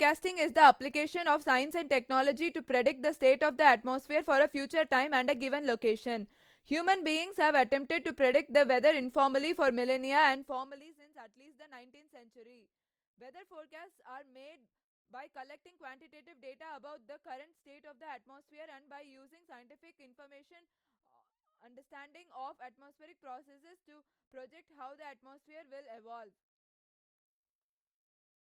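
Zipper noise runs from 10.21 to 10.98 s. The speech level drops by roughly 25 dB in coarse steps, around 70 a second, with no smoothing between them. Each jump leaves a tiny click, so a fast ticking buzz rides on the fade.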